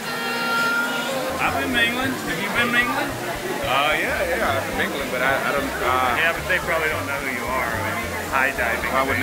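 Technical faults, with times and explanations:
Throughout, low bit depth without dither: the samples were likely rounded to very few levels, fitting 5-bit quantisation with no dither, so grainy distortion follows the sound, sitting only about 15 dB below it.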